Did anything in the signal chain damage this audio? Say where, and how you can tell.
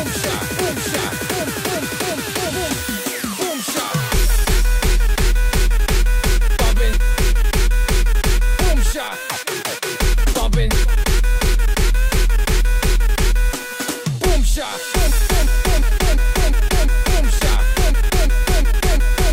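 Yes: damaged data in a compressed stream, at the codec stage, from 6.89 to 6.94 s. A brief glitch lasting about 50 ms interrupts the sound there. Corrupted bytes made the decoder misread those frames, lose sync and hunt for the next valid frame header before playing cleanly again.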